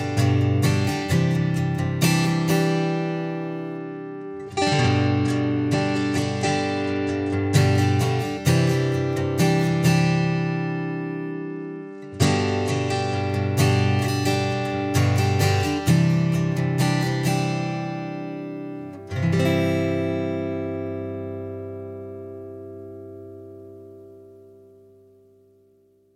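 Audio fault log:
3.77–7.57 s and 11.33–13.24 s, Bluetooth SBC bit pool drop: the treble dulls and a gritty grain rises across the sound. A congested link forced a much smaller SBC bit pool, which fits a drop to around 96 kbps. The top sub-bands lost their bits and the rest were quantised coarsely until the rate recovered.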